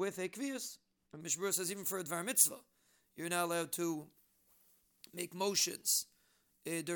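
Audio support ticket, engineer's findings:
Pre-emphasis left on, 1.20 s to end: thin, bright, hissy speech with exaggerated sibilants. The FM 75 µs boost went uncorrected, leaving about 14 dB extra at 10 kHz over 1 kHz. Unlike a treble shelf, it rises steadily from near 2.1 kHz.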